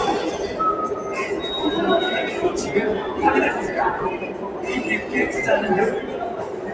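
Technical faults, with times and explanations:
Throughout, noise suppressor applied to sounds: a speech-tuned suppressor mistakes sustained sound and tails for noise, dipping them roughly 5 dB while attacks mostly pass.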